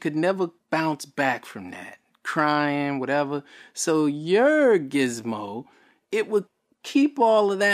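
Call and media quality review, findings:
No faults found in speech.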